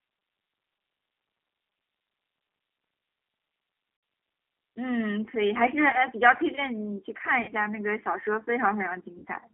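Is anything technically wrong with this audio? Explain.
Yes, there are two problems. Throughout, the speech sounds slightly rough and synthetic, with nothing below 300 Hz or above 3.4 kHz. This is G.729 codec damage, consistent with an 8 kbit/s VoIP link. The codec doesn't send the waveform. It sends a vocal tract filter, a pitch predictor and a few pulses per frame, and the decoder rebuilds an approximation of the speech from those. That rebuilding is what makes it sound artificial.

Four times, the speech briefly turns into a buzzy tone or coloured noise that fades before normal sound returns: 3.97–4.03 s, 5.90–5.98 s, 7.42–7.52 s and 9.19–9.26 s. The gaps last about 60, 30, 60 and 60 ms. This is VoIP packet loss concealed by the speech codec. With packets missing, the decoder keeps extending its last pitch and filter and lowers the gain on each frame. Because each frame depends on the one before it, the speech stays weak or distorted for tens of milliseconds or more after each gap.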